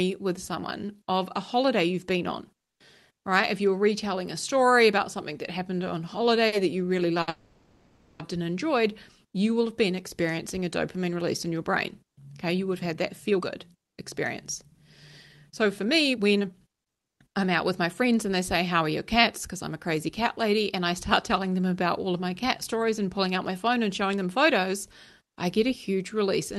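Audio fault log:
6.47–6.54 s and 7.22–7.30 s, short stall from a late packet: the jitter buffer ran dry, so the receiver stretched the last sound for 50 ms, then 60 ms, and resumed where it stopped. A spectrogram shows harmonics smeared flat; the waveform shows repeated, near-identical cycles.
7.30–8.22 s, call audio freeze: right after the second stall, the sound is held for 0.9 s as a fading buzz that never drops to silence, with nothing lost afterwards. The likely cause is packets held up in transit. A spectrogram shows frozen horizontal bands decaying under Opus's 12 kHz ceiling.
12.93–13.98 s, 15.52–19.87 s and 22.74–25.21 s, jitter buffer speed-up: the receiver trimmed surplus buffered audio by cutting whole pitch periods, running at 121%, 109% and 105% speed and removing roughly 0.2, 0.4 and 0.15 s. The pitch holds but the sound feels hurried. The waveform shows compressed syllables with normal cycle lengths.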